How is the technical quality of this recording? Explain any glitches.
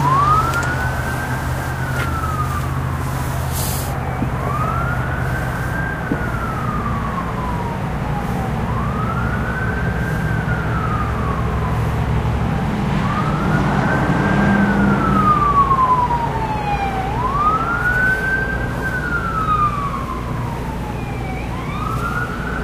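Nothing in this recording of sounds stood out as a technical problem on listening.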